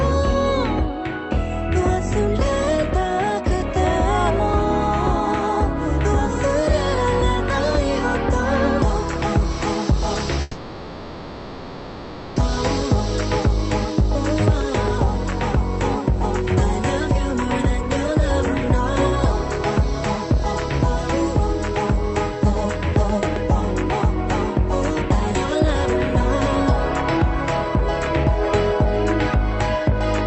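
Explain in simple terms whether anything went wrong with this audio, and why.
Three things went wrong on the way through the call.

From 10.41 to 12.38 s there is a call audio freeze. The audio packets were most likely held up in transit, and the receiver's small waiting store of audio ran dry. To cover the gap, it kept stretching out the last bit of sound for almost two seconds, heard as a fading buzz or hiss. When the packets finally arrived, playback resumed exactly where it had stopped. Nothing is lost, but everything after that point is about two seconds late.

From 13.53 to 16.66 s comes a jitter buffer speed-up. The late audio had piled up, so the receiver tried to catch up by snipping out many tiny slices, roughly a tenth of a second in total. The sound plays about 3% faster without any change in pitch.

At 25.33 s there is a skip ahead. Roughly a second of audio was thrown away while later audio was already waiting to play. 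Playback jumps straight forward, and the two sides are joined almost directly. Whatever belonged in that second is simply missing, and with it about half of the earlier delay is recovered.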